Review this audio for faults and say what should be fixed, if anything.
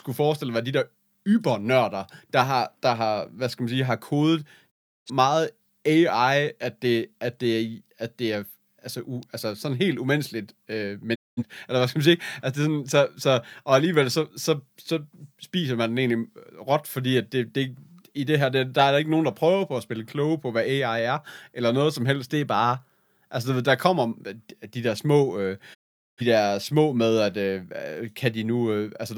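Three digital broadcast dropouts mute the speech at 4.70 to 5.11 s, 11.14 to 11.43 s and 25.73 to 26.22 s, each with a quick 20 ms fade to silence. The receiver stopped decoding corrupted frames, losing about 0.34 s, 0.21 s and 0.43 s of programme. Fixing this requires better reception margin through antenna placement or signal strength.

A single sharp snap at 9.23 s sits on top of the speech, an electrical switching spike most likely caused by a nearby switch, motor or static discharge arcing into the audio line. Shielded cabling, proper grounding and distance from switching equipment would prevent it.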